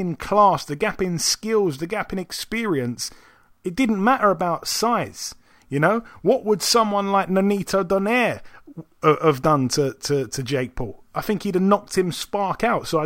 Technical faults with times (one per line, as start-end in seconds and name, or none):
none